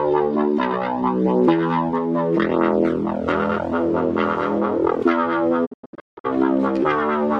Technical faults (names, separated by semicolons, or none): digital broadcast dropout